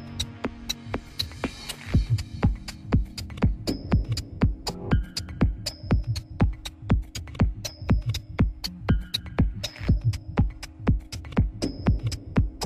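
From 9.25 s to 12.29 s there is channel delay with comb filtering: one channel arrives a tiny fraction of a millisecond late, consistent with a one-sample offset, and the mono sum cancels near 20 kHz, giving a slightly dulled, softened top end.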